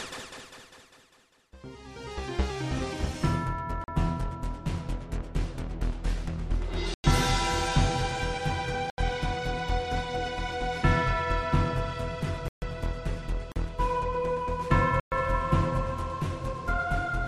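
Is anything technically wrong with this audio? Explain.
Yes. The sound drops out abruptly six times, at 3.84 s (40 ms), 6.94 s (100 ms), 8.90 s (80 ms), 12.48 s (138 ms), 13.52 s (40 ms) and 15.00 s (120 ms). Each cut is long enough to read as a brief hole rather than a tick. These are blocks of digital silence: stretches of samples replaced by zeros with no fade, typical of an output buffer that was not filled in time.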